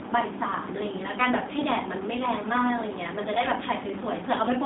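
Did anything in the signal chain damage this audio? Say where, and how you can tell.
Yes, at the codec stage: the whole clip has been through G.729 (the G.729A variant, by the sound of it). The band runs only from about 200 Hz to 3.7 kHz, so the speech has that boxed-in phone-line quality, and throughout there's a plainly audible rough, slightly synthetic texture. That comes from the codec discarding the actual waveform and resynthesising each 10 ms frame from a vocal tract filter, a pitch predictor and a few pulses, which fits an 8 kbit/s stream.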